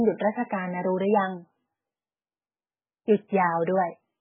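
Throughout, the speech sounds watery and swirly with nothing above 3.5 kHz, likely heavy MP3 compression at a very low bitrate near 8 kbps; unlike a plain low-pass filter, it smears attacks.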